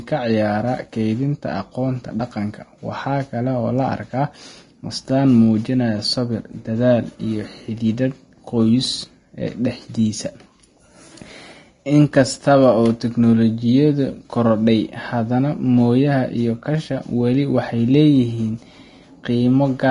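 From start to finish the speech carries plainly audible Vorbis compression damage, likely from a low bitrate around 32 kbps: nothing remains above 10.6 kHz, and the coarsely quantised treble turns grainy and hissy. A spectrogram shows a hard ceiling with speckled, noisy upper bands.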